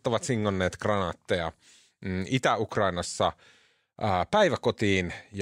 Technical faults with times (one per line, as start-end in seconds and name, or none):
none